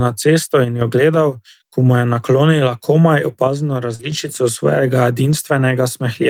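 From 0.64 to 0.81 s, between "na cesto" and "jo gledal", one channel drops out, likely a lost stereo channel, so the mono sum falls abruptly by about 6 dB. The same likely cause returns from 3.48 to 4.12 s, with another drop of about 6 dB. Inside that span, at 3.95 to 4.01 s, a short concealed packet loss occurs: 40 ms never arrived in time, and the receiver filled 36 ms by extending the preceding sound, giving a brief smear. At 3.99 to 4.01 s and again at 5.31 to 5.33 s, a lost packet was rebuilt from error correction: a 20 ms low-bitrate copy carried in the next packet was played, so those frames sound rougher and noisier rather than silent.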